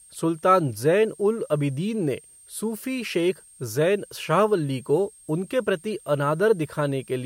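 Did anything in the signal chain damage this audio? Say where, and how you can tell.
Yes. A switching supply whistle sits in the analogue stage throughout the speech: a faint tone drifting between 8.5 and 8.7 kHz, about 30 dB down, drawn as a thin wavering horizontal line on a spectrogram.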